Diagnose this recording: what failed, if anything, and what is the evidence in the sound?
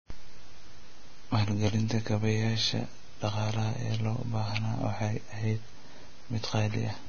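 The failure sits at the codec stage, and the likely culprit is heavy Vorbis compression throughout the speech. Nothing is present above 6.5 kHz, and just below that edge the treble turns to grainy hiss instead of real detail, with roughened tones and smeared consonant attacks. That points to a low bitrate near 19 kbps. A simple low-pass filter would leave the remaining band clean. Here the surviving treble is replaced by noise of similar energy.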